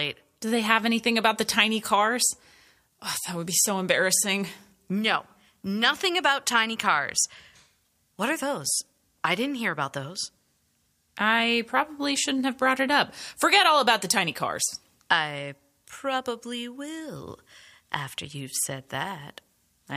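No technical faults can be heard anywhere in the recording.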